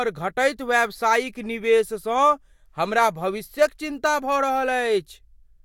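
A short speech recording with no technical fault to report. Nothing in the audio points to a problem in how it was captured, processed or delivered.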